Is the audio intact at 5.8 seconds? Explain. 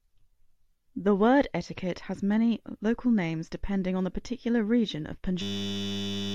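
No. At 5.8 seconds the speech is caught in a system hang loop running from 5.42 to 6.34 s. The system froze while the hardware kept replaying one 10 ms slice of its buffer. That repeats at 100 Hz, a steady buzz replacing about a second of speech.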